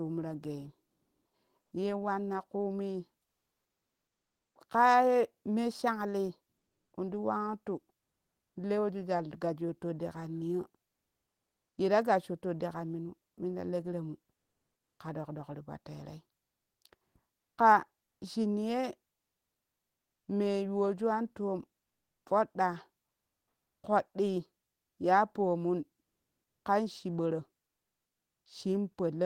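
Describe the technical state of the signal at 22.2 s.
At 22.2 s, comfort noise in place of the background runs from 21.85 to 22.25 s, after "me yuwoju an toom". Transmission was halted during the pause, likely by Opus DTX. The receiver filled the gap with steady, featureless synthetic noise about 3 dB below the real background.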